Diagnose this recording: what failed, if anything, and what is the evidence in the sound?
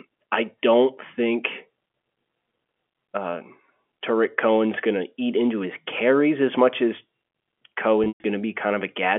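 Network stage: packet loss with pitch repetition, 8.04 to 8.24 s. About 160 ms is missing across 200 ms. The receiver repeats the last pitch period, giving a short buzzy hold. The longest gap, 120 ms, fades to silence, then cross-fades back.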